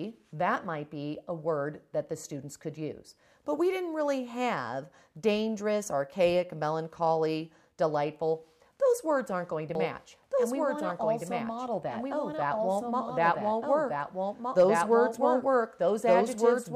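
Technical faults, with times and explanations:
9.75 to 16.75 s: doubled audio track, likely from a second, slower capture path mixing the same audio back in, so a full-band copy about 5 dB quieter trails by roughly one and a half seconds, switching on abruptly and running to the end.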